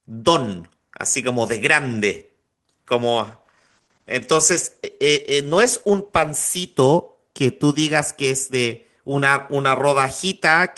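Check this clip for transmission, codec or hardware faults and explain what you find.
One fault is present: a call bitrate drop from 3.11 s to 7.15 s. The connection's bandwidth estimate fell, so the encoder had far fewer bits per frame. The coarser coding that results is consistent with a fall from about 32 kbps to around 16 kbps, held at its lowest for roughly 3 s. During that stretch the speech sounds rougher and more muffled, with the top end dulled, before clarity returns as the rate recovers.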